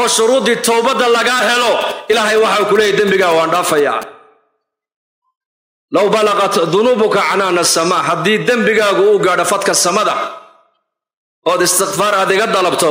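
From 1.43 s to 4.04 s, GSM signalling bursts break in. A nearby 2G phone is exchanging short control transmissions with its network rather than carrying a call. The audio circuit rectifies those radio pulses and turns them into sound. The result is a galloping dit-dit-dit of ticks and brief buzzes. The buzz repeats at about 217 Hz, the frame rate of the phone's transmissions. It sits roughly 15 dB below the wanted sound.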